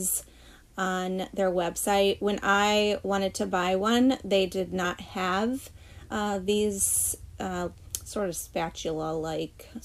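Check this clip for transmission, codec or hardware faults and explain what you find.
There is one fault type, occurring twice.

Compressed frames skipped at 4.84 s and 6.1 s. Missing or decoder-rejected frames make the sound jump ahead by roughly 50 ms, then 40 ms. This shows as a sudden waveform envelope shift and a thin spectrogram seam.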